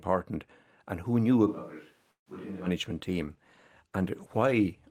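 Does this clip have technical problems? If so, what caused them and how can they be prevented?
Yes. From 1.49 to 2.65 s the sound turns hollow and roomy, about 10 dB quieter, with room noise near 30 dB below the speech. This is likely a switch to a distant microphone after the close one dropped out. On a waveform it shows as a sudden shrink in amplitude, and a spectrogram shows thinner lows and a raised noise floor. Monitoring the close microphone and its battery or connection prevents this fallback.

At 2.11 to 2.28 s a short buzz fades into about 120 ms of silence. Then the audio resumes where it stopped, with nothing lost but everything after it arriving 148 ms late. This is likely a call audio freeze from a jitter buffer that ran empty. On a spectrogram it appears as a smeared tail followed by a blank vertical band. A steadier network path or a larger jitter buffer prevents it.

From 3.05 s to the end the audio turns rough and muffled. 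A call bitrate drop from 64 to 18 kbps forced coarser coding and cut the high frequencies. On a spectrogram this shows as the upper band vanishing and blurred detail. Securing enough uplink bandwidth keeps the encoder from throttling.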